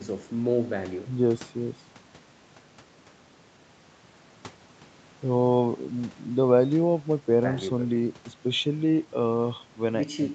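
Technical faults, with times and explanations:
There are no technical faults to list, so there are no times or explanations to give.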